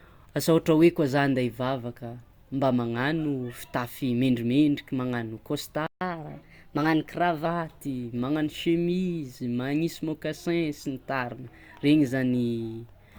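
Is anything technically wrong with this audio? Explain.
Yes. A playback stall at 5.87 s cuts the speech off just after "magnano fitafy mendrimendriky magnano" and leaves about 145 ms of silence until 6.01 s. This is likely the player running out of buffered data or having its output thread briefly blocked.

Catch-up at higher speed follows from 6.01 to 7.46 s. The player resamples its backlog to play it 1.1 times faster and regain the lost time. The speech runs quicker and sounds about a semitone and a half higher, then drops back to normal.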